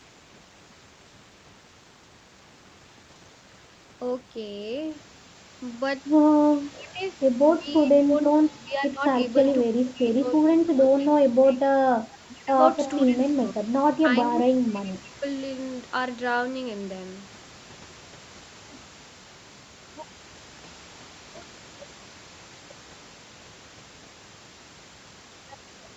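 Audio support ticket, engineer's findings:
Speech suppressed in double talk, 6.52–11.65 s and 12.27–15.43 s. Likely the echo canceller failing to separate near talker from loudspeaker echo and attenuating both. Near-end speech dips or breaks up, deepest about 35 dB then about 40 dB, roughly 3 s and 2 s affected.

Echo leak, 9.44–9.89 s, 10.51–10.55 s and 12.85–12.99 s. Far end likely on loudspeaker with incomplete echo cancellation, so residual returned to sender. Short delayed copies of the voice, 327 ms behind, about 25, 30 and 20 dB below speech.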